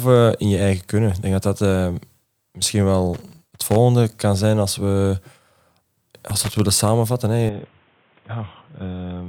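From 3.14 to 3.76 s, just before "kan zijn als we", and again from 6.29 to 6.60 s, loose connector crackle chops the speech into scratchy bursts, seen as jagged vertical spikes on the waveform. At 7.49 s the input likely switched to a poorer device. The speech turns dull and boxy and drops about 5 dB with no gap. On a spectrogram everything above 3.8 kHz is empty, and a new noise floor sits roughly 35 dB down.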